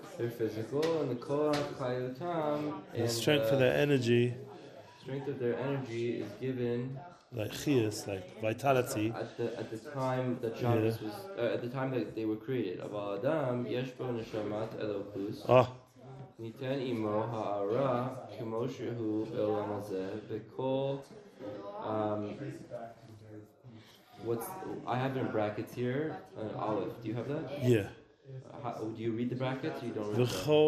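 MP2 compression runs through the whole clip: the sound is dull and carries a gurgling, granular roughness, with the upper range dropping in and out. This is likely MPEG Layer II starved of bits, consistent with roughly 80 kbps, switching off upper sub-bands and coarsely quantising the rest.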